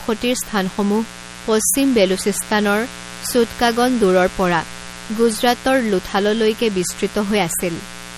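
A steady, raspy buzz runs under the speech from start to finish, sitting roughly 20 dB below it. This is mains buzz at 60 Hz: sharp switching spikes from the supply leak in twice per cycle, and their harmonics stretch from the fundamental up into several kHz.

Also present throughout, the speech has a plainly audible watery, swirly quality, with metallic chirps on s sounds, smeared onsets, and nothing above 16.9 kHz. This points to MP3 compression, likely at a low bitrate around 48 kbps, where weak frequency lines switch on and off between frames and the treble is cut off.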